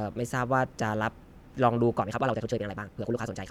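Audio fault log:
2.01–3.50 s, time-stretched section: from 2.01 s to the end the speech runs at twice its earlier pace while the pitch stays put, so it sounds rushed, likely from software squeezing this stretch to fit a shorter length by dropping short pieces. On a spectrogram, the harmonic lines stay at the same heights, but syllable shapes are compressed to half their width. The waveform shows packed envelopes with small jumps where pieces were spliced.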